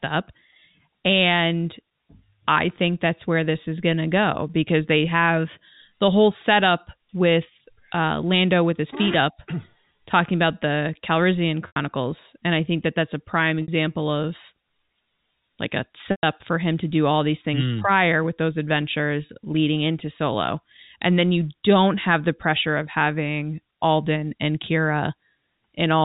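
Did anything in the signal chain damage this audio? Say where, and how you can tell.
Yes. The network dropped packets, heard as packet loss with pitch repetition: the receiver looped the last pitch period to fill the gap, giving a brief held buzz at 11.67 s (90 ms), 13.62 s (60 ms), 16.11 s (120 ms, fading toward silence) and 19.26 s (30 ms), over an otherwise clean-sounding telephone-band G.711 line.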